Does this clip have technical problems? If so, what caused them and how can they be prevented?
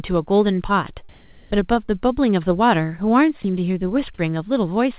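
Yes, there are three faults in this speech clip, all heard within the telephone-band sound of the call path, which stops at 4 kHz.

Comfort noise in place of the background, from 1.09 to 1.51 s (420 ms): the real room tone gives way to a steady, featureless hiss, with the level shifting by about 7 dB. This is likely discontinuous transmission, where the sender paused and the receiver synthesised noise. On a spectrogram the textured background becomes a smooth, uniform band up to 4 kHz. Disabling discontinuous transmission, or sending comfort-noise updates more often, prevents it.

Short concealed packet loss at 1.86 to 1.90 s: about 20 ms never arrived, and the decoder filled 23 ms by extending the preceding sound, heard as a brief smear. A deeper jitter buffer or forward error correction prevents it.

Sound dropped by the voice detector at 3.42 to 3.44 s: about 10 ms of speech is cut, and 20 ms is replaced by flat noise, likely because the detector judged the sound to be background. 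A spectrogram shows speech energy ending abruptly in a uniform noise patch. A longer detector hangover or a lower detection threshold prevents it.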